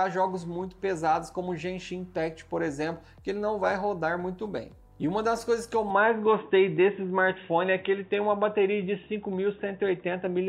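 At 5.90 s the recording system likely switched to a poorer input device, a different microphone or a headset in its call mode, which carries on to the end of the clip. From that moment nothing is heard above about 3.8 kHz, so the sound turns dull and boxy. The level jumps by a few decibels, and a faint new background noise appears far beneath the signal. There is no gap at the changeover.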